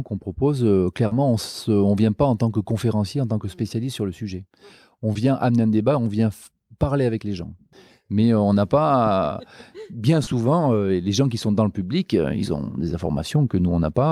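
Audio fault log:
1.07–1.13 s, 5.13–5.17 s, 10.23–10.29 s: short concealed packet loss. About 40 ms, 20 ms and 40 ms of audio arrived too late to decode. The receiver extrapolated the preceding signal and crossfaded back, heard as brief smears or wobbles in the speech.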